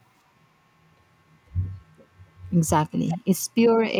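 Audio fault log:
3.07–3.18 s and 3.92–3.97 s, echo leak: the far end's echo canceller likely failed to fully subtract what its loudspeaker fed back into its microphone, so a residue of the speech was returned down the line. It surfaces as two brief, faint scraps, a delayed copy trailing the original by 364 ms and sitting roughly 15 dB below it, short enough to sound like a clipped ghost of the preceding speech.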